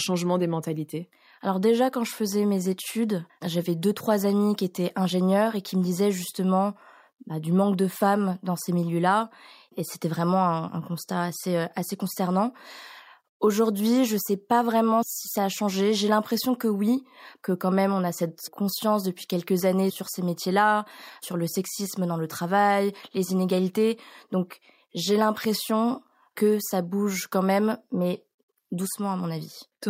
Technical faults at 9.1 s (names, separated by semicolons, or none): none